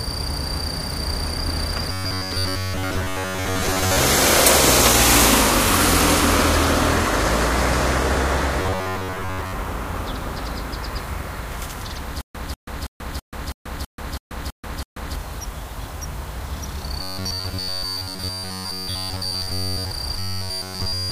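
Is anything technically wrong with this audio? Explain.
Yes. There are two kinds of fault, robotic sound from repeated short buffers and a stutter with silent gaps.

Robotic sound from repeated short buffers occurs at 1.92–3.97 s, 8.60–9.54 s, 17.02–19.91 s and 20.17 s to the end. It is likely caused by audio arriving too slowly, so playback keeps recycling a fragment of roughly 10.7 ms while fresh material is dropped. That loop imposes a fixed 93.8 Hz buzz. In the first two spans most of the sound is replaced and only loosely tracks the original. In the last two it is entirely the rigid, metallic drone.

A stutter with silent gaps runs from 12.21 to 15.16 s. A stalled stream likely retried repeatedly, replaying the same 192 ms fragment nine times. Each repeat is followed by about 135 ms of digital silence, giving an even 327 ms cycle. The result is a mechanical, clockwork repetition of one short burst, and the audio that belonged in that window never plays.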